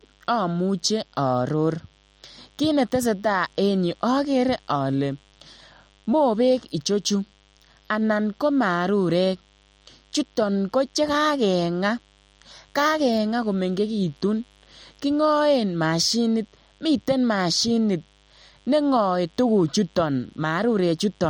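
Mains buzz sits under the speech from start to end, a steady, raspy drone roughly 35 dB below it. Switching spikes tied to the 50 Hz supply leak in, spraying harmonics up into the kilohertz range, which makes it gritty rather than the smooth, low tone of plain hum.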